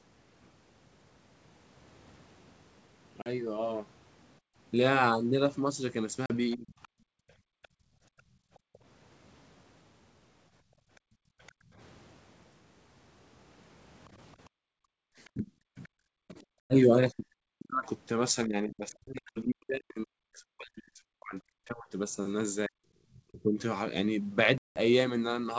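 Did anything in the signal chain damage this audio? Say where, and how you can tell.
Yes. Packet loss on an ADPCM call, a network fault, cuts hard-edged holes at 3.22 to 3.28 s (40 ms), 6.26 to 6.31 s (40 ms), 16.60 to 16.74 s (100 ms) and 24.58 to 24.80 s (180 ms). The longer gaps point to runs of several packets. Each gap is filled with silence, and with the packets lost the decoder's predictor and step size lose track of the sender's. The speech then comes back slightly distorted and takes a few tens of milliseconds to settle.

Background gated by the echo canceller, in the call processing stage, shows up between 4.4 and 15.06 s. The room tone dips away, by about 37 dB at its deepest, for around three seconds in all. It drops whenever the far end plays through the loudspeaker and recovers once the canceller releases. That points to heavy suppression applied to the microphone path while it judged echo to be present, not to any change in the room itself.

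The other side's voice leaking through is audible from 6.51 to 11.52 s and again from 15.25 to 15.89 s. A second voice sits roughly 30 dB under the main talker. It is most likely loudspeaker output reaching the microphone that the echo canceller failed to subtract fully. That leaves a faint residue riding under the near-end signal instead of being removed by the call processing.

Speech suppressed in double talk appears where both sides overlap. The first instance is a brief dip of roughly 30 dB at 6.56 to 6.75 s. The second is a long stretch from 15.34 to 23.58 s, where the talker drops by up to about 40 dB, for around five seconds in total. The likely cause is the echo canceller failing to tell the near-end talker from loudspeaker echo and turning everything down.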